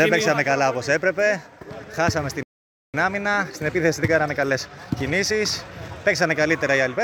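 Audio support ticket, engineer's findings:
Playback stall, 2.43 to 2.94 s: output drops to silence for about 0.51 s mid-flow, then resumes. Likely buffer underrun or blocked playback thread. Waveform: flat silent gap with abrupt edges. Spectrogram: clean vertical blank band across all frequencies.

Time-compressed catch-up, 2.94 to 5.94 s: audio runs hurried at 1.1x with pitch unchanged. The player trims its backlog by splicing out small segments and cross-fading the joins. Spectrogram: harmonics stay at normal height, but events are squeezed closer in time. Waveform: denser envelope for about 3 s, then normal pacing.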